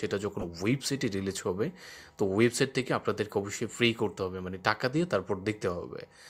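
At 0.40 s a corrupt frame decoded. Flipped bits in the compressed data reached the decoder, which played roughly two frames anyway. Misread gains and codes placed energy at wrong frequencies until 0.44 s. The result is a brief artefact, its error energy reaching about -20 dBFS.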